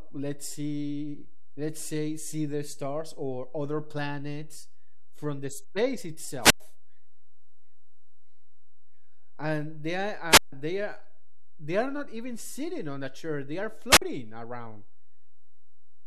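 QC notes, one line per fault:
Throughout: DC offset, a constant shift of about -32 dBFS, inaudible itself but sitting as steady energy at 0 Hz and eating headroom, unlike low-frequency hum, which varies.
6.41 to 6.60 s, 10.30 to 10.52 s, 13.90 to 14.02 s: wireless microphone squelch dropout, right after "planets from the space", just before "they are they are", and after "a chair they are". Each is a burst of rising hiss, then a muted hole of about 100, 150 and 50 ms as the receiver's squelch shuts off the fading FM signal. That hiss before the silence separates it from a clean digital dropout.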